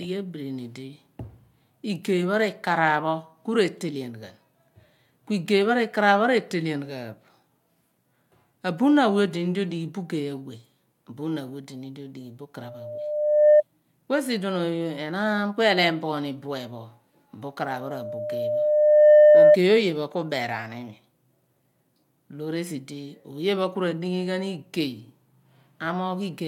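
At 12.61 s there's a loudspeaker feedback squeal. The mic is catching the speaker it feeds, and around 601 Hz the loop gain tips past one, so that tone feeds on itself. It swells over about a second to roughly 10 dB above the speech before it drops out at 13.63 s. The same 601 Hz tone comes back at 17.63 s, building over about a second and a half to around 15 dB above the speech, and lasts until 19.57 s.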